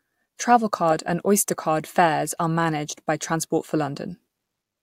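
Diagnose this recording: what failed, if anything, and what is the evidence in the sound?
No fault found in the recording.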